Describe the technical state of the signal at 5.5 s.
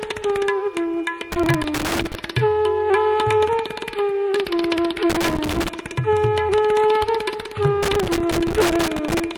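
At 5.5 s the signal is in the middle of a burst of loose connector crackle running from 5.10 to 5.69 s. A worn or dirty contact is making and breaking intermittently, chopping the audio, heard as irregular scratchy crackle.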